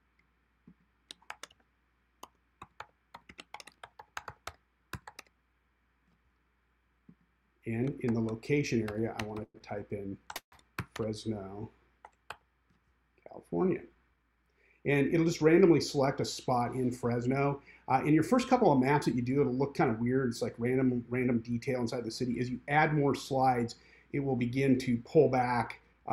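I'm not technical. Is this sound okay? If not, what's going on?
No, there are a few glitches of the kind you hear on a weak internet call.

Call audio freeze, at 9.43 to 9.57 seconds and again at 10.36 to 10.55 seconds. The sound briefly hangs and fades, then goes quiet for a moment: about 40 milliseconds the first time, about 90 milliseconds the second. The likely cause is that pieces of the audio got held up on their way. The receiving end ran out of audio, so it stretched the last bit it had until the rest arrived. Afterwards the sound picks up exactly where it stopped, so nothing is lost. It is just paused.

Short stall from a late packet, at 9.58 to 9.63 seconds, right after the first freeze. One small piece of audio arrived late, so the last sound was held on for about 18 milliseconds too long before carrying on. Nothing is missing, but you may notice a tiny drag or buzz.

Jitter buffer speed-up, at 13.82 to 14.72 seconds and at 25.80 to 26.08 seconds. 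The receiving end had more audio stored up than it wanted. To catch up, it snipped out many tiny slivers, so the sound plays about 15 to 17 percent faster without changing pitch. The first stretch loses about a seventh of a second and the second about a twentieth, so both sound hurried.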